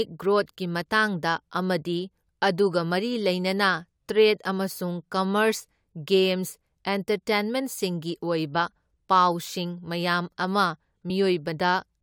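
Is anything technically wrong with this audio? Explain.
Yes. At about 11.09 s, right after "ꯃꯌꯥꯥꯝ ꯑꯃ", the speech is broken by a very brief chirp or blip lasting about 14 milliseconds. This is damaged data in a compressed stream: a short stretch of the encoded file was corrupted, so the decoder could not read the frame there correctly, lost its place in the bitstream, and had to hunt for the next valid frame header before normal playback could resume.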